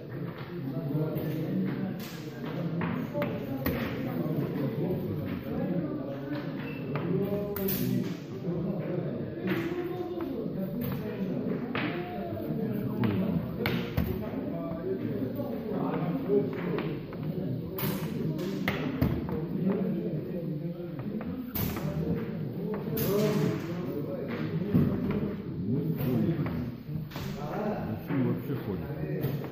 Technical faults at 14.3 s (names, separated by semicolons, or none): none